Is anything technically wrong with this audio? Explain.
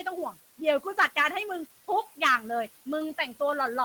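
Yes. Two technical faults are audible in this speech clip.

Noise suppressor artifacts run throughout. The suppressor pulls down the bands it treats as steady noise by about 14 dB, frame by frame. The room noise, sitting about 18 dB below the speech, drops away in pauses and swells back under speech.

Hard clipping occurs from 0.68 to 1.27 s and again from 2.23 to 2.36 s. The signal exceeds what a stage in the chain can pass, by about 7 dB and then about 9 dB, so peaks are sliced flat. The flattened tops generate high harmonics, heard as crackle or fuzz on the loud parts.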